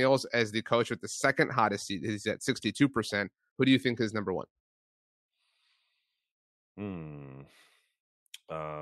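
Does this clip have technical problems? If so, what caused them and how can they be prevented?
No, there are no technical problems to hear in this speech clip. With nothing gone wrong, there is no cause to trace and nothing to prevent.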